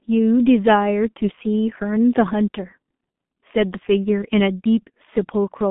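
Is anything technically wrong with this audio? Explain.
Yes, the whole speech clip has been through a G.723.1 codec. Its low-bitrate 30 ms frames strip everything above about 3.8 kHz, leaving muffled, hoarse speech with smeared consonants, consistent with roughly 6 kbit/s.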